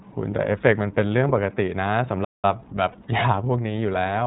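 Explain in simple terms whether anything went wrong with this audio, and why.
The whole clip sounds thin, slightly rough and synthetic, with no crispness above 4 kHz. That is the iLBC codec, a narrowband phone-call codec working in 30 ms chunks.

From 2.24 to 2.45 s the speech cuts out mid-flow for about 188 ms, then carries on. This is a playback stall, likely caused by the player briefly running out of data.

Around 2.91 to 2.95 s there is a short, held, faintly buzzy sound. These are lost iLBC frames: the decoder repeated the last bit of voice to fill the gap, which fits a single missing 30 ms frame.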